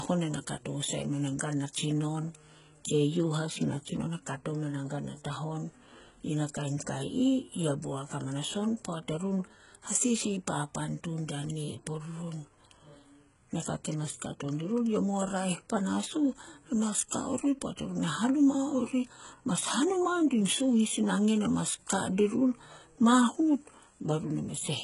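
Speech throughout, with heavy HE-AAC compression damage, likely at about 12 kbps: s sounds turn gritty and metallic, and nothing sits above 11.1 kHz. Unlike plain lowpass loss, bright treble remains, but it is synthetic, rebuilt from lower bands.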